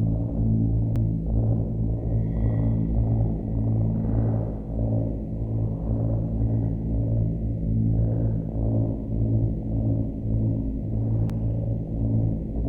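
At 0.96 s and again at 11.30 s, fresh audio arrived late and the device replayed its last 5.8 ms block once, a repeated buffer that fits a 256-sample size, heard as a click or brief buzz.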